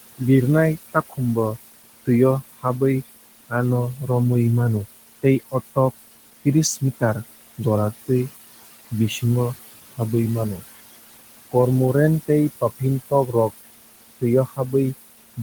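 Noise suppressor artifacts run through the whole clip. The suppressor estimates the steady room noise, which sits about 14 dB below the speech, and pulls those bands down by about 18 dB frame by frame. Between phrases the background sinks away, and under the speech it comes back up, so the floor pumps with the talker.

Speech cut by the noise suppressor occurs at 0.93 to 1.19 s and again at 14.47 to 14.74 s. In both spots the suppressor mistook quiet speech energy for noise and attenuated it along with the background, by up to about 17 dB in the first instance and about 14 dB in the second. Roughly a tenth of a second of sound is affected each time. Soft consonants or a trailing syllable there sound swallowed, dipping before the level recovers.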